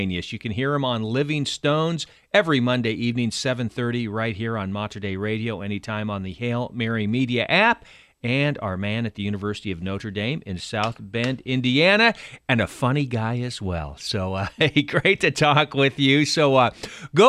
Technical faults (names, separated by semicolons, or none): none